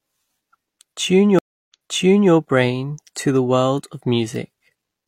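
At about 1.39 s there's a stream reconnect: the connection dropped, leaving roughly 0.29 s of dead silence before a fresh decoder picked up mid-stream. It rejoins 0.64 s earlier than where it cut, so a bit repeats before "brain to the world", settling by 2.32 s.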